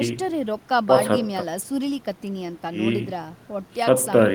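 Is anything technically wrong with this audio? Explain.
No, the speech signal has no technical faults that can be heard.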